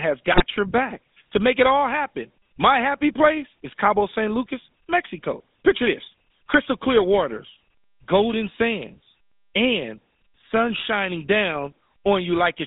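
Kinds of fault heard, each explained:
GSM full-rate codec: Vocal-tract model driven by regular pulses, consistent with 13 kbps coding; band limited to about 200 Hz to 3.6 kHz, with plainly audible buzzy, gravelly roughness throughout.
GSM bit errors: Corrupted decoder parameters distort the spectrum and level, producing a brief squawking, gargled burst from 0.32 to 0.44 s, just before "your back to make".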